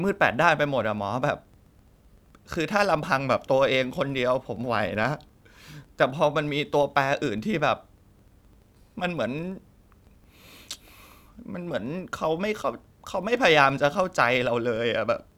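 From start to finish the speech carries a faint, regular ticking at about 23.4 Hz, rough enough to read as a low buzz. That's a filter restarted on every block: it throws away its memory at each boundary and begins again from silence, so each block opens with a small transient. The rate fits a 2048-sample block, and the buzz gets louder when the speech does.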